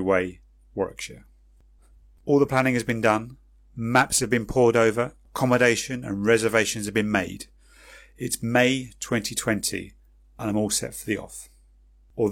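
No technical faults can be heard anywhere in this speech recording. There is nothing to mark at any point, so no times or values need to be given.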